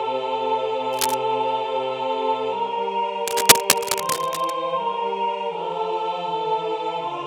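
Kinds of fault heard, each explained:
Cable scratch noise: scratching bursts at 0.93–1.14 s and, louder than the sound, 3.27–4.50 s, likely a worn connector moving; irregular, unlike evenly spaced clicks.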